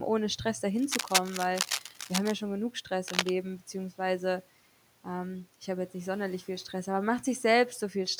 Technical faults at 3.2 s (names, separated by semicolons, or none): cable scratch noise